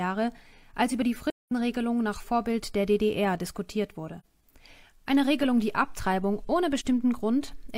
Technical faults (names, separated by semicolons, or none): AAC frame loss with muting; DC step